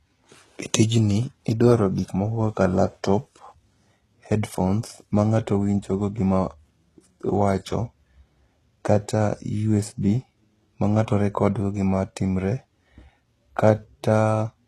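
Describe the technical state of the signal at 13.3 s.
At 13.3 s you're hearing what runs through the whole clip: a hard ceiling around 12.4 kHz, with the top end grainy and the sibilants metallic and lispy. That's likely HE-AAC compression at a low rate, consistent with about 16 kbps, where the treble is rebuilt from copied lower bands rather than coded directly.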